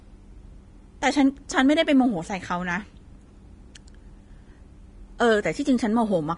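Speech with Vorbis compression throughout: nothing above 10.6 kHz, and grainy, hissy treble rather than a clean low-pass dullness, which fits a likely encode around 30 kbps.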